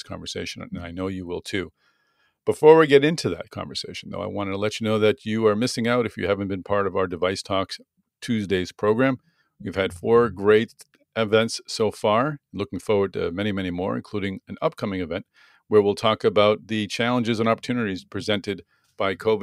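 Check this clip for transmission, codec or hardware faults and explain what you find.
Nothing faulty turns up anywhere in this speech recording.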